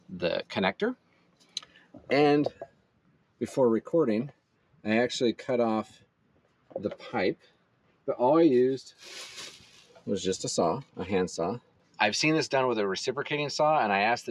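A speech-tuned noise suppressor left running on non-speech material is treating steady parts of the sound as noise. Throughout the clip its gain keeps shifting by around 5 dB, so held tones and ambience swell and sink while onsets pass through more intact. The result is a pumping and a thinned, unsettled body, with tails not allowed to sustain naturally.

At several points the sound is cut by the noise suppressor more deeply, at 0.96 to 2.09 s, 2.6 to 3.41 s, 4.34 to 4.85 s, 5.95 to 6.71 s, 7.36 to 8.06 s, 9.64 to 10.04 s and 11.6 to 11.99 s. Each time it clamps down by about 12 dB (about 10 dB at 9.64 s) for somewhere between 0.3 s and a second. Sustained or decaying material sinks in level and its fade is cut short, then recovers when the suppressor releases.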